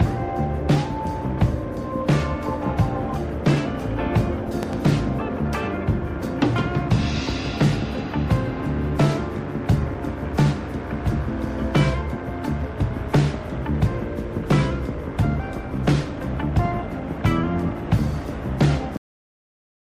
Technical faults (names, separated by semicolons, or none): loud pop; cut-off end